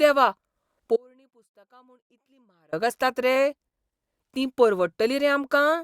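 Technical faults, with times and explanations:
0.96 to 2.73 s: audio dropout to a faint residue. The speech cuts out abruptly for about 1.76 s. Only a faint leak remains, roughly 35 dB below normal level. The likely cause is a lost signal path while the chain downstream stayed live.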